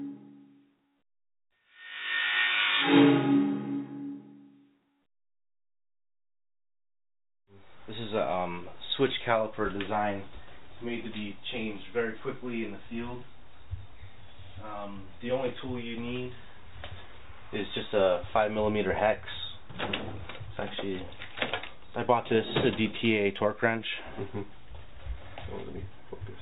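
The audio has no technical faults to describe in time order.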